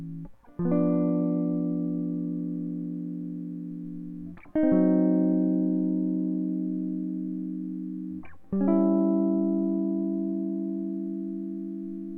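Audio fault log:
No faults are present in this music clip.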